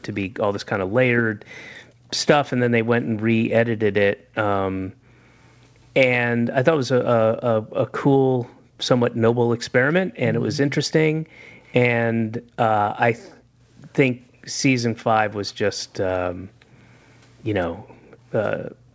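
Speech recorded through a call, with two recurring faults. Echo leak appears at 0.02 to 1.64 s, 4.33 to 5.53 s, 11.48 to 11.73 s, 13.31 to 13.35 s and 15.47 to 18.32 s: a faint copy of the speech trailing by 189 ms, around 30 to 40 dB down. The likely cause is a far-end loudspeaker whose echo canceller let some of its own playback through. Background gated by the echo canceller occurs between 0.74 and 5.16 s and again from 7.61 to 18.94 s. Here the room sound dips by up to about 40 dB while the canceller suppresses the microphone, adding up to roughly a second and a half, then about three seconds.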